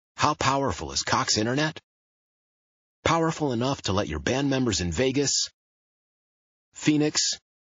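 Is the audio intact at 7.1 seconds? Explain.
No. From 7.12 to 7.15 s there is pre-echo: a hiss about 19 dB above the background spreads roughly 31 ms ahead of an attack, softening it. This happens because quantisation noise is spread across a long transform block of about 72 ms, with no switch to short blocks. The whole clip also carries plainly audible MP3 compression, with a watery, swirly sound, likely from encoding at a low bitrate around 32 kbps.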